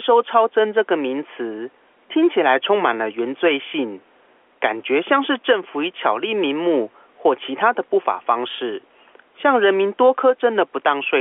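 Gain pumping runs through the whole of this speech recording, the likely result of input gain set far too high with a fast limiter clamping down on each loud syllable. The gain swings by roughly 5 dB, so loud and quiet passages are squashed together. The room noise sits about 41 dB below the speech, heard through the narrow 300 Hz to 3.4 kHz telephone band.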